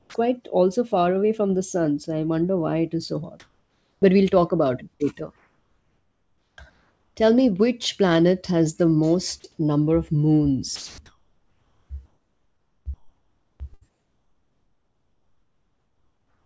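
At 0.00 to 0.14 s the sound is dropped by the voice detector. The start of the clip, just before "also far away from", gives way to steady noise. About 80 ms of real sound is lost. The likely cause is a voice detector that mistook the quiet onset for background and held off sending, so the receiver played comfort noise instead.

From 3.40 to 4.02 s, after "it is so hot", comfort noise replaces the background. The room tone turns smooth and featureless. Its level shifts by about 4 dB, and it sits about 47 dB below the loud parts. This is likely discontinuous transmission. The sender paused in the silence, and the receiver filled the gap with synthetic noise. The same swap returns from 5.36 to 7.16 s, a longer stretch of flat, even hiss.

At 9.40 to 9.44 s, between "which planet has the" and "number of", sound is dropped by the voice detector again. About 20 ms goes missing, leaving a tiny gap of steady noise mid-phrase. 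Likely the detector briefly judged that moment as background.

From 10.76 s to the end, the sound is chopped by the voice detector. Word edges and quiet parts cut in and out. This likely comes from the detector toggling between sending and not sending more than once. Throughout, nothing is heard above 8 kHz, which points to a G.722 call codec.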